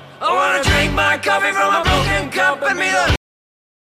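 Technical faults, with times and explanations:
3.16 to 3.95 s, cut-off end: the audio stops abruptly mid-sound and falls to digital silence with no decay, because the final buffers were never written out.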